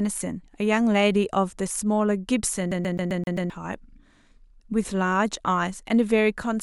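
Speech, with a fast, even stutter from 2.71 to 3.50 s: the same 131 ms fragment repeats six times, each pass broken by a brief mute. This is a CD stuck on one turn, where a scratch keeps throwing the laser back a track at the same point each revolution.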